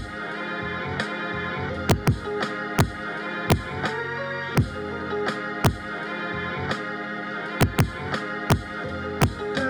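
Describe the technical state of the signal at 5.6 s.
At 5.65 s there is a single integer overflow. A peak ran about 2 dB past the integer limit and wrapped to the opposite sign, giving a violent, sharp crack.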